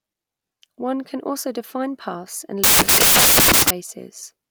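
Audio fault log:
2.64–3.70 s, samples built from the wrong bytes: after "also define paths and", misassembled bytes turn low bits into loud, harsh broadband noise and a flat full-band spectrogram block.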